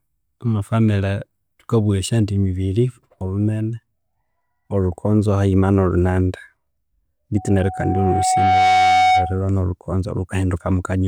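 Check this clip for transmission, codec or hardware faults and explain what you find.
One real problem here, and it's a hardware one: loudspeaker feedback squeal from 7.36 to 9.43 s. A 744 Hz tone swells over about a second and a half until it sits a few dB above the speech. The mic is hearing its own loudspeaker, and at that frequency the loop gain tops one, so the tone keeps feeding itself.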